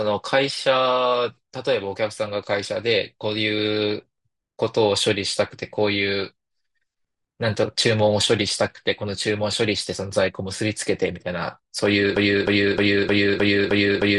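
A speech clip that, from 12.16 s to the end, turns into a broken-record loop: one 309 ms fragment repeats exactly, back to back, seven times, and whatever should have followed is lost. The likely cause is a stalled player, encoder or stream resending its last buffer.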